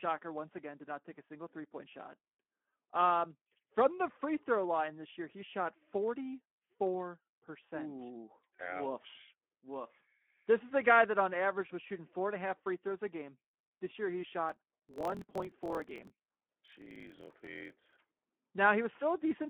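A speech recording passed through a Speex codec at about 11 kbps, a setting that fits a 200 to 3400 Hz line band, leaving nothing above 3.4 kHz and plainly audible codec damage: noisy, hoarse voicing. From 14.47 to 18.35 s, just after "year he", a block size mismatch (truncated) drops the end of each block, which fits a 1024-sample read, adding a 43.1 Hz buzz and running the speech 1.12 times fast.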